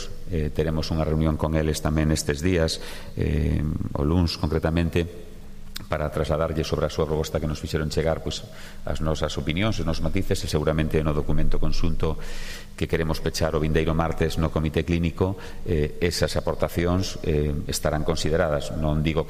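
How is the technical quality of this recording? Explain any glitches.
The technical quality is compromised by one fault that runs for the full length of the clip: low bit depth without dither. The sound carries a grainy, gritty distortion that rides along with it and shifts as the material changes, sitting only around 35 dB below the signal. Quiet passages suffer most, turning rough, and the faintest detail sputters or drops out. The likely cause is 8-bit truncation: each sample was chopped to a coarse step without added noise, so the rounding error tracks the waveform instead of spreading out as a smooth hiss.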